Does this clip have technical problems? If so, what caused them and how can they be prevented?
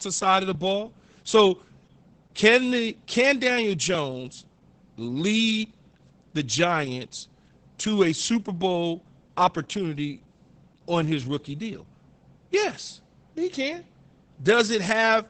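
Yes: Opus voice compression throughout, with nothing above 8.9 kHz and a muffled, hoarse, slightly robotic quality from coarse SILK coding, fitting roughly 10 kbps. Raising the bitrate to 24 kbps or more would prevent it.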